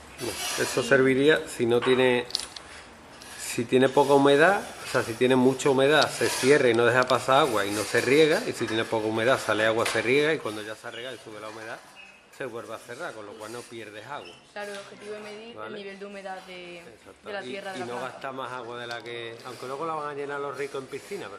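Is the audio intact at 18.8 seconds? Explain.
Yes, the audio is intact at 18.8 seconds, with no fault at that moment.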